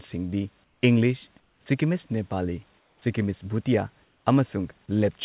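In the speech pauses at 0.64–0.82 s, 1.4–1.66 s, 2.78–3.02 s and 4.04–4.26 s, the room's own background gives way to comfort noise in place of the background: a flat, detail-free hiss, about 5, 6, 5 and 3 dB quieter than the real room, which sits roughly 40 dB under the speech. The likely cause is discontinuous transmission, with the far end synthesizing filler noise while the sender goes quiet. The call codec's band-limiting (nothing above 4 kHz, consistent with G.711) colours both.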